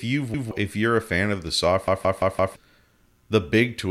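Speech with a repeated buffer fault twice: at 0.34 to 0.51 s one slice of about 171 ms plays again, and at 1.88 to 2.56 s a slice of the same length loops four extra times, a stutter with hard joins that fits an 8192-sample buffer. Fresh audio arrived late, so the device replayed its last block, and well over half a second is lost at the second point. Unlike a dropout, there is no silent gap, only identical sound recurring.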